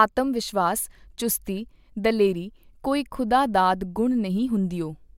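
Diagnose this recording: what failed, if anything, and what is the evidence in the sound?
No stage failed; the speech shows no audible fault.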